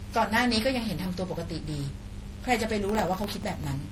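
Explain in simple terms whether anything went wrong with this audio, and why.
Mains buzz runs through the whole clip: electrical interference from the 50 Hz power supply leaks into the recording as a steady, raspy hum under the speech.

Generation loss is also present throughout. The speech sounds swirly, hollow and smeared, with blurred starts to sounds. The likely cause is repeated saving in a compressed format, with small errors piling up each time.

Processor overload crackle runs from 2.89 to 3.64 s. The computer fell behind and kept replaying tiny slivers of old sound, producing a gritty tearing that stops once it catches up.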